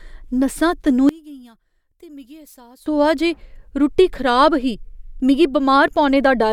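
From 1.09 to 2.86 s the speech drops by about 25 dB into a faint trace, snapping back just before "होआ जे रुट्टी". That's likely one channel inverted: with a flipped polarity, the centred voice cancels when the two sides are summed to mono.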